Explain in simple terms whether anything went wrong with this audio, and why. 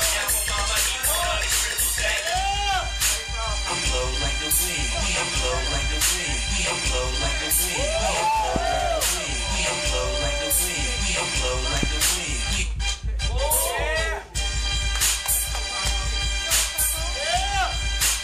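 Something in the signal chain jolted the audio twice. The likely cause is a sudden electrical spike, such as a plug, switch or static discharge, being added to the signal. Each spike is heard as a loud pop lasting only a couple of hundredths of a second, at 8.56 s and again at 11.83 s. Each one jumps out well above the surrounding level, while the sound carries on underneath without a break.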